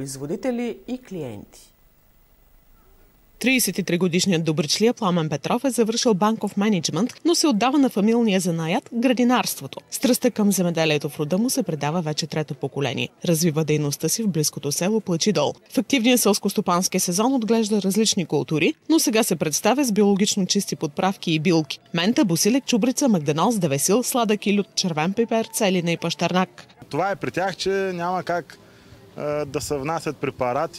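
Nothing in this one trips any alarm, so there's no technical fault to point to anywhere in the recording.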